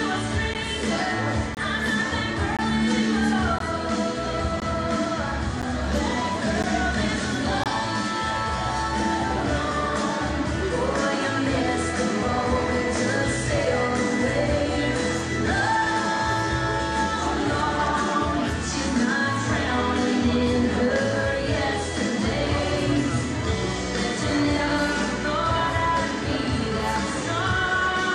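Gaps between stream segments cut hard-edged silences into the sound at 0.54 s, 1.55–1.57 s, 2.57–2.59 s, 3.59 s, 4.60 s, 5.62 s, 6.63 s and 7.64–7.66 s, each roughly 10 to 25 ms. Their steady one-second spacing matches the segment length: adjacent time stamps failed to meet, so the player filled the gap with silence. Unlike a dropout, nothing is missing; the sound resumes exactly where it stopped, only slightly delayed.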